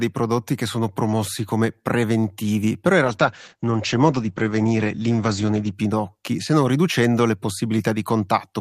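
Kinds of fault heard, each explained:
Call bitrate drop: the encoder gets far fewer bits, so speech turns coarse and muffled, top end cut from 20 kHz to 8 kHz, fitting 40 to 11 kbps.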